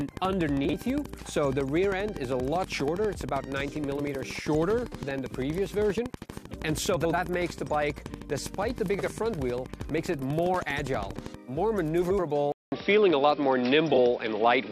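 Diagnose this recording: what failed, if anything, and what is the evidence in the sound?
Steady ticking runs from 0.01 to 11.35 s at a regular 12.5 per second, peaking well above the sound. This train of clicks is likely interference in the analogue wiring.

Brief garbled flutters occur at 0.65, 6.96, 8.98, 12.02 and 13.94 s. These are frames out of order: blocks of 21.3 to 85.3 ms swapped in the codec or network stage.

At 12.52 s, after a 200 ms gap, the sound turns dull and boxy. Nothing remains above 5.6 kHz, the level shifts a few dB, and a new noise floor appears. The input likely switched to a poorer device.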